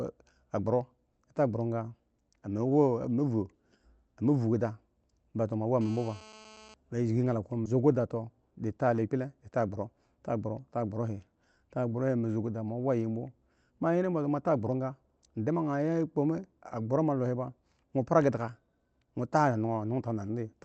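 From 5.81 to 6.74 s a GSM phone buzz sits under the speech, about 22 dB below it. A nearby 2G handset in an active call transmits 217 bursts per second, and the audio circuitry rectifies those pulses into a harsh, steady, harmonic-rich rasp at 217 Hz that has nothing to do with the speech.

At 7.65 s there is a skip ahead: roughly a second of audio was dropped while later audio was already queued. Playback jumps straight across the gap with no fill, so the two sides butt together abruptly and a stretch of speech is simply gone.

Jitter buffer speed-up follows immediately, from 7.75 to 9.25 s and again from 9.66 to 9.94 s, both at 111% speed. With too much audio buffered, the receiver repeatedly cut out short pitch-period chunks, roughly 150 ms and 40 ms in total. The speech sounds hurried while its pitch stays unchanged.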